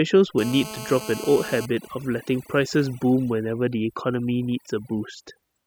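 Throughout the speech, overdone noise removal is at work: a noise reducer set far too aggressively keeps switching off individual frequency bands it mistakes for noise, taking quieter parts of the voice with them. The background drops and breaks up into twinkling specks.

From 0.38 to 1.65 s, GSM phone buzz intrudes: a 2G phone on an active call transmits in bursts about 217 times a second, and the audio circuitry rectifies those radio pulses. The result is a hard, raspy 217 Hz buzz rich in harmonics, steady and unrelated to the speech, at about 13 dB below it.

From 1.65 to 3.31 s, the buzz gives way to GSM signalling bursts: with the phone's user silent mid-call, it sends only short groups of bursts, which the circuitry again rectifies. This is heard as faint even ticks with a longer 217 Hz buzz twice a second, roughly 25 dB below the speech.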